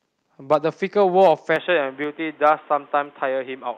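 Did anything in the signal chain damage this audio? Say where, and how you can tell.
Yes. The loudest syllables at 0.52–0.56 s, 1.21–1.31 s and 2.46–2.50 s turn harsh and crackly, with peaks about 3, 2 and 1 dB over the converter's limit flattened. This is microphone overload, likely from input gain set too high, so the converter clipped a few percent of samples.

From 1.56 s to the end the sound abruptly goes dull and boxy, with a new noise floor about 30 dB down, but no gap or level jump. This points to the input being switched to a poorer device, likely at the driver stage.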